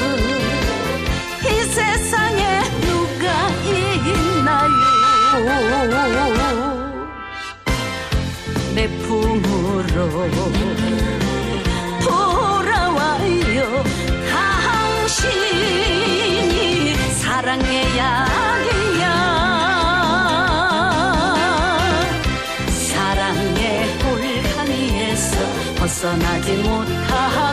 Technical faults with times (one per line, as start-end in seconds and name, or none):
3.53-5.43 loudspeaker feedback squeal